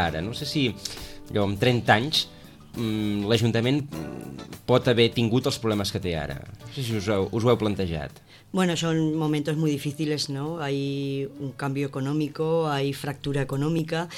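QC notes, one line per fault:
3.80 s, 8.79 s and 13.79 s, audio missing between chunks: the recording was likely captured in blocks of about 5 s, and at each handover between one block and the next a few milliseconds of audio were dropped instead of carried across. The material on either side of each gap is joined directly with no silence in between, so the sound jumps forward slightly at these three points, evenly spaced about 5 s apart.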